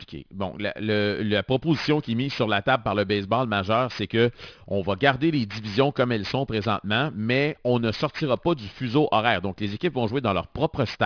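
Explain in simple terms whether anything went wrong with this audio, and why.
Aliasing runs through the whole recording, from start to finish at about 11 seconds. The audio sounds like it was converted to a much lower quality, which fits a drop to roughly 11 kHz sampling, without first removing the high sounds that format can't hold. Everything above 5.5 kHz folds back down as false, unrelated tones, so the hissy s and sh sounds in the speech come out gritty and metallic.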